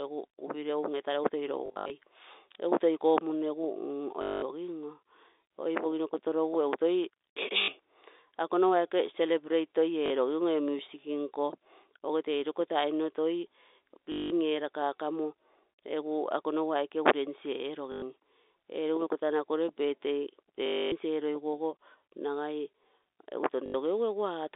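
Packets were lost and the receiver replayed the last one, a packet loss with last packet repeated, at 1.66–1.9, 4.22–4.42, 7.62–7.68, 10.06–10.1, 14.12–14.3, 17.92–18.02, 20.66–20.92 and 23.66–23.74 s, heard through narrow telephone-band G.711. Each gap becomes a robotic stutter buzzing near 50 Hz, which fits 20 ms packets.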